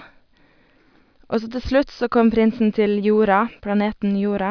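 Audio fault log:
No audible faults detected.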